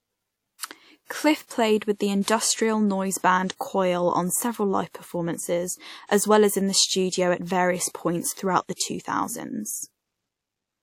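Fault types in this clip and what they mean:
Pre-echo: The transform codec spread the quantisation noise from one coding block evenly across that block, so the noise set by a sharp attack near its end also spilled into the quieter moment just before it. In this speech clip the effect sits at about 8.33 to 8.37 s: a short hiss runs for roughly 38 ms ahead of the attack, and the onset itself comes across softened and smeared.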